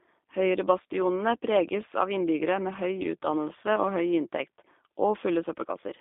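From start to end, the speech carries G.729 codec damage, and it is plainly audible. The sound fits an 8 kbit/s G.729A link. The codec does not keep the waveform. It rebuilds each short frame from a vocal tract filter, a pitch predictor and a few pulses. That leaves a rough, slightly synthetic edge. The line band runs from 250 Hz to 3.6 kHz. Lows are thin, and nothing bright survives above it.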